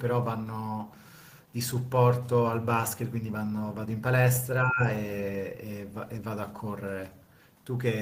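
From 4.61 to 4.86 s, the echo canceller likely could not tell the near talker apart from loudspeaker echo while both sides spoke at once, and it attenuated everything it heard. The result is speech suppressed in double talk: for about a quarter of a second the voice sinks sharply, by roughly 15 dB at its deepest, before returning to full level.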